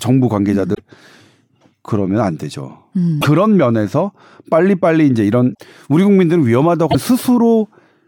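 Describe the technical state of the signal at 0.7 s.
At 0.71 to 0.80 s there is damaged data in the compressed stream: corrupt bytes make the decoder misread frames and resynchronise, producing a brief chirp, squawk, click or short hole.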